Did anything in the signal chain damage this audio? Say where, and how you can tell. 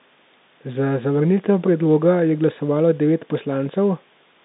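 No, nothing in the chain damaged this speech clip. It carries the narrow band of a G.711 telephone line, roughly 150 Hz to 3.7 kHz, with at most a faint trace of coding grain riding under the signal.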